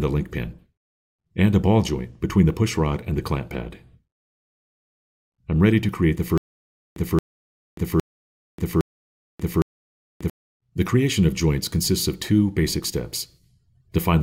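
From 6.38 s to 10.30 s the sound breaks into a stutter with silent gaps: the same 224 ms fragment plays four times, each followed by about 587 ms of dead digital silence, repeating every 811 ms. This is likely a stalled player or stream re-playing its last buffered fragment on each retry. Unlike plain dropouts, the identical burst returns at a steady rhythm, and the audio that should have filled that stretch never arrives.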